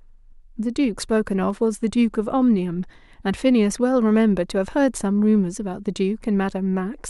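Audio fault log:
1.50 s and 3.70 s, dropped samples: each moment is a single sharp click, a thin vertical line across the spectrum. The likely cause is a handful of samples, well under a millisecond, going missing, so the waveform jumps abruptly to a later value.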